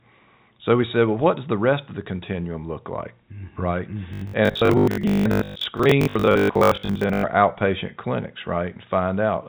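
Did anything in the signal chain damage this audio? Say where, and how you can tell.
Yes: robotic sound from repeated short buffers, 4.13 to 7.25 s, before "outpatient clinics", a rigid 50 Hz buzz over about half the audio, likely buffer underruns looping 20 ms blocks.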